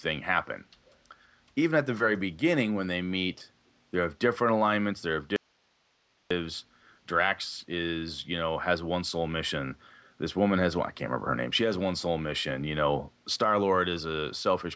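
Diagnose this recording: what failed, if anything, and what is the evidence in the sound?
There's a brief echo leak at 0.87 to 0.97 s: a faint, delayed copy of the speech arriving about 235 ms behind the original, sitting very low, roughly 35 dB under the voice. That's the call-processing stage. The far end is likely on a loudspeaker, and its echo canceller didn't fully subtract what its mic picked up from the speaker, so a scrap of the returned signal slipped back down the line.

Then there's an audio dropout to a faint residue from 5.36 to 6.31 s, so about 0.94 s of wanted signal just vanishes. The speech cuts off abruptly rather than fading, and the gap isn't silent. It holds hiss around 40 dB below the normal level, which tells you the path after the break stayed live. The most likely culprit is the network stage, where a run of lost audio left the downstream chain passing only its own noise until the signal resumed.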